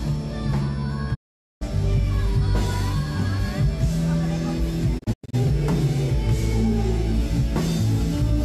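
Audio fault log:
1.13 to 1.63 s and 4.97 to 5.35 s, digital broadcast dropout: the receiver mutes after a 20 ms fade when frames go bad. The sound vanishes for about 0.46 s, then later breaks into short holes, the longest 96 ms. The waveform flatlines, and the spectrogram shows blank columns spanning all frequencies.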